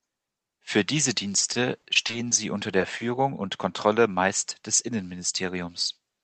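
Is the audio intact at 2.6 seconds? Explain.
No. The moment falls inside repeated packet loss (robotic sound) from 1.53 to 3.16 s. Nine short gaps, each up to 20 ms, are patched by extending the previous sound, giving choppy speech with pieces missing. A spectrogram shows frozen, smeared harmonic patches with hard vertical seams, and the waveform shows repeated short segments.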